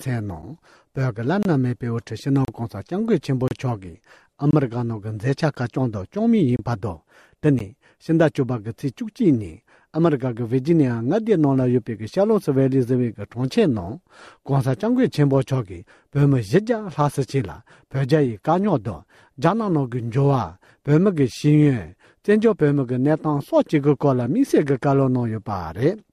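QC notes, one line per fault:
0.42 s, 1.43–1.45 s, 2.45–2.48 s, 3.48–3.51 s, 4.51–4.53 s, 5.55 s, 6.56–6.59 s, 7.59 s: gap between stream segments. Hard-edged silent holes of 9 to 32 ms recur about once per second because consecutive 1-second segments' timestamps leave a gap that the player fills with silence.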